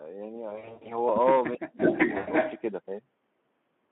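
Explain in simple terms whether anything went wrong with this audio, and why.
Yes, a few things went wrong. The whole recording passes through the Speex codec at a fairly low quality setting, squeezed into a narrow phone-style range. Speex doesn't have enough data to rebuild the voice cleanly, so the speech sounds hoarse, grainy and a bit muffled from start to finish.

Between about 0.49 and 0.92 s there's VoIP packet loss concealed by the speech codec. About 220 ms of audio went missing in scattered bits, the longest gap being 100 ms. The decoder filled the holes by stretching the last sound it had, so you hear a smeared, buzzy or noisy sound that fades and takes a moment to recover. The same thing happens again from 2.17 to 2.29 s, with about 100 ms lost.

From 1.56 to 1.8 s the voice suddenly sinks right down for about a fifth of a second. That's most likely speech suppressed in double talk: both sides spoke at once, and the echo canceller turned this voice down along with what it took for echo.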